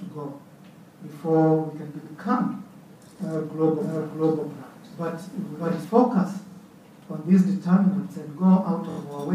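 From 3.80 to 5.84 s, a doubled audio track is heard. A full-band copy of the audio runs about 0.7 s behind the original, at roughly the same loudness. It has no decay or room colour, and it starts and stops abruptly. The likely cause is a second capture through a slower path, or an edit holding two copies out of step. Repeated frames cause two stutters. At 6.50 to 6.60 s, a 46.4 ms block plays twice more, adding 92.9 ms. That fits a pair of compressed frames. At 8.90 to 8.97 s, a 23.2 ms block plays three more times, adding 69.7 ms.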